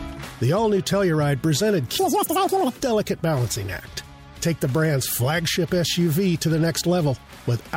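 From 1.99 to 2.80 s the audio is read two samples at a time, taking each pair as one frame as if the stream held two channels or wider samples. Playback jumps to 2.0 times speed and an octave higher.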